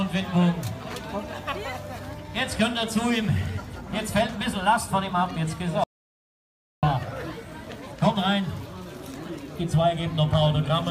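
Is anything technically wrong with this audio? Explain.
Yes. An audio dropout to silence runs from 5.84 to 6.83 s, about one second of sound lost. The input was likely cut off, by a dropped connection or stray mute, while recording continued writing silence, so the sound stops abruptly mid-flow into dead digital silence with no room tone, then resumes just as suddenly.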